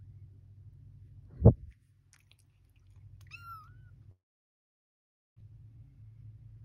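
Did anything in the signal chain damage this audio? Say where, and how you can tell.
Yes, two faults at the network receiving stage.

Long network dropout, 4.11 to 5.42 s: the sound abruptly gives way to a short buzzy continuation of the last moment, which fades into about 1.2 s of near silence. When the audio resumes, about 1.04 s of material is gone rather than delayed. That pattern likely points to a stall in packet delivery. The receiver's concealment smeared the final fragment, gave up, and then resumed with the missing stretch discarded.

Jitter buffer speed-up, 5.50 to 6.62 s: right after the gap, the audio runs at about 108% speed while the pitch stays unchanged, giving a slightly hurried feel. After the stall, which left the delay about a fifth of a second longer, delayed packets arrived together and the buffer overfilled. The receiver then trimmed short pitch-period slices, roughly 100 ms in total, to pull the delay back toward its target.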